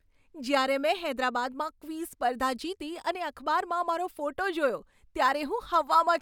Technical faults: none

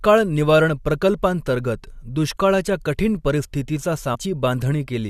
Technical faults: stream segment skipped

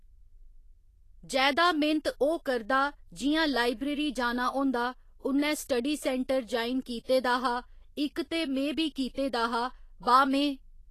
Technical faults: Vorbis compression

